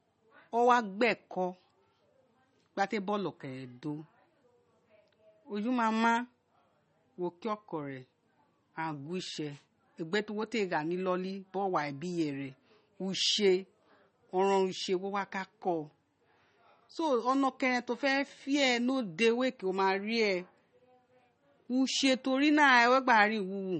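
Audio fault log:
Throughout: MP3 compression. The speech has nothing above 8.3 kHz, so the top end sounds dull and the s sounds lose their edge. The damage is plainly audible as a watery, swirly texture. Weak frequency detail flickers on and off from one frame to the next. Consonant attacks smear. The likely cause is MP3 encoding at a low bitrate, which fits about 32 kbps. Too few bits forced the encoder to cut the treble and drop quiet detail.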